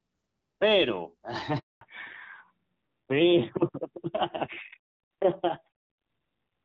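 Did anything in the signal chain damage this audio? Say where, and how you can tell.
Yes. Handover gap, network stage, 1.59 to 1.81 s: the speech cuts out for 220 ms while the call switches networks and no frames arrive.

Fallback to narrowband, codec stage, from 1.81 s to the end: everything above 4 kHz disappears as HD Voice at 12.65 kbit/s drops to AMR-NB at 7.4 kbit/s, sounding duller and rougher.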